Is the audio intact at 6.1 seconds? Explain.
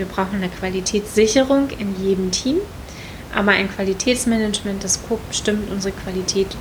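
Yes, the audio is intact at 6.1 seconds, with a bed of room noise about 14 dB below the speech.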